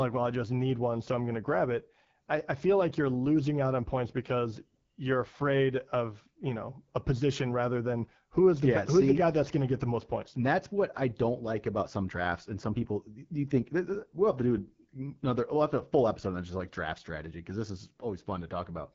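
From start to finish the speech carries the sound of the AMR wideband (HD Voice) codec, with plainly audible damage. Nothing is present above about 7.5 kHz, and the top of the band has a hissy, noise-filled quality rather than real detail. The voice sounds rough and raspy, the character of the codec's vocal tract model running short of bits, which fits one of its lowest modes, around 8.85 kbit/s.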